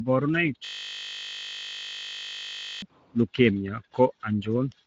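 Speech clip with Speex codec damage throughout: hoarse, noisy, plainly audible CELP roughness rather than swirly transform-codec artefacts, nothing above 7.7 kHz, consistent with roughly 16.8 kbps. From 0.65 to 2.82 s a system hang loop repeats one 20 ms fragment exactly, producing a steady 50 Hz buzz rather than the gaps of a dropout.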